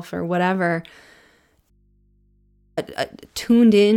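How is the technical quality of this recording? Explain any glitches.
The recording has one clear glitch. An audio dropout to a faint residue runs from 1.70 to 2.77 s. The speech cuts out abruptly for about 1.07 s, leaving only mains hum roughly 45 dB below the signal. That hum likely comes from an open input that stayed live after the break.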